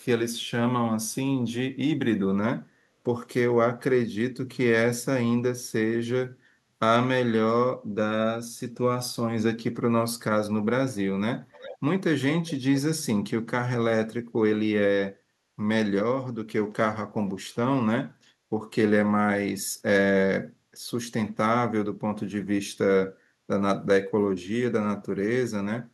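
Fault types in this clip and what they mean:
Echo leak: from 11.52 to 11.78 s the speech is followed by a faint delayed copy arriving about 398 ms later, roughly 15 dB below the voice. This is likely loudspeaker sound reaching the far-end microphone and slipping past an incomplete echo canceller back down the line.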